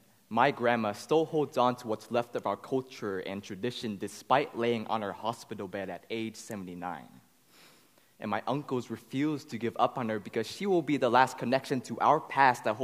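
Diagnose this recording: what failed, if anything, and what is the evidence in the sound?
Nothing here points to a failure anywhere in the chain, so there's no stage to pin a problem on and no evidence of one to chase down.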